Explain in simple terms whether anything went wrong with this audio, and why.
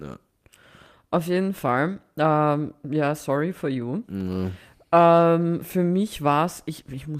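Nothing went wrong: the speech comes across intact, with no audible faults anywhere in the recording.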